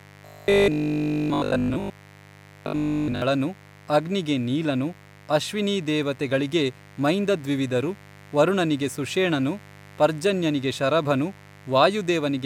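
A mains buzz runs under the whole clip, a steady, raspy 50 Hz hum sitting roughly 25 dB below the speech. Sharp switching spikes from a dimmer, rectifier or poor shielding are getting in, so its harmonics stack up well into the kilohertz range.

From 0.02 to 3.22 s the speech turns into a stiff, metallic drone, that robotic sound from repeated short buffers. Likely fresh audio wasn't arriving in time, so everything you hear is a 20 ms chunk looping, which imposes a rigid 50 Hz buzz.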